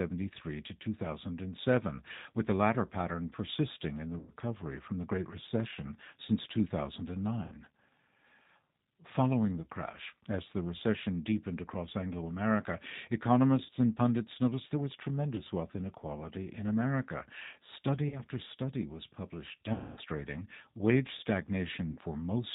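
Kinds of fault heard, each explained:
G.729 codec: speech is rebuilt at 8 kbit/s from a vocal tract filter and a pitch predictor, giving a plainly rough, synthetic sound; the spectrogram stops sharply at 4 kHz.
VoIP packet loss concealed by the speech codec: the decoder stretches the last pitch and filter over each gap, giving buzzy, fading tones that show as smooth, decaying, over-regular harmonics.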